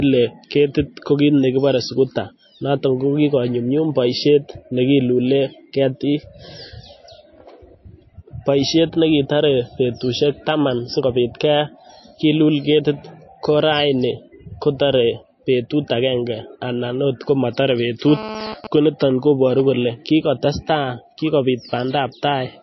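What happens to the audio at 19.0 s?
At 19.0 s you're in the middle of a GSM phone buzz that runs from about 18.08 to 19.61 s, starting right after "akenge anan oot komotore". A nearby 2G phone doing a data transfer pulses its radio about 217 times a second, and the audio circuitry rectifies those bursts into a hard, raspy 217 Hz buzz with lots of harmonics. It sits about 10 dB below the speech and comes and goes with the transfer.

Underneath that, the whole clip carries plainly audible codec damage, likely from MP3 compression at a bitrate that fits something around 26 kbps. There's nothing above 5.8 kHz, and with so few bits the encoder keeps dropping weak frequency lines from frame to frame, which gives the speech a watery, swirly edge.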